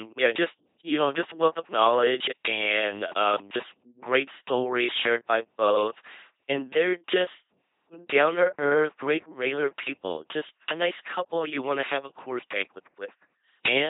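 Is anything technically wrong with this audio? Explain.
Yes. Throughout, the speech passes through an LPC-10 vocoder. A ten-pole filter driven only by pulses or noise yields a buzzing robot voice, hissing where voicing is misjudged. Unlike ordinary codec smearing, natural timbre is heavily lost, which fits 2.4 kbit/s. Nothing sounds above 3.8 kHz.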